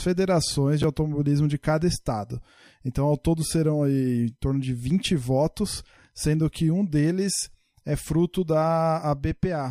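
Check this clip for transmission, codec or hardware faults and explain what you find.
One fault stands out: chunks out of order at 0.82 to 0.84 s. A 10 ms piece of the speech arrived or was written one chunk late, so it plays after the chunk that should follow it. Nothing is missing, but the swap creates three hard joins, heard as a brief jumbled flicker. Unlike a dropout, there is no gap or silence and no audio is lost. The same material is simply heard in the wrong order.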